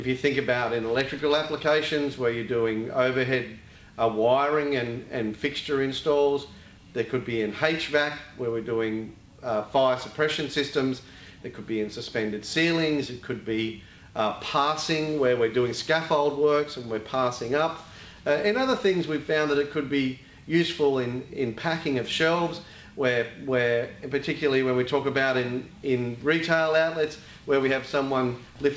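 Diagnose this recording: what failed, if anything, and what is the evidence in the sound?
Nothing failed; no fault is audible anywhere.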